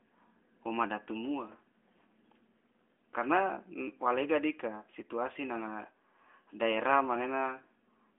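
No technical faults detected.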